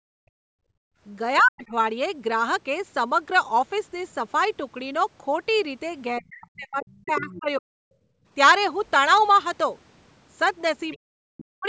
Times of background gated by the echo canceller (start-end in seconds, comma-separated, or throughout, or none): 0.00-1.00, 7.95-8.26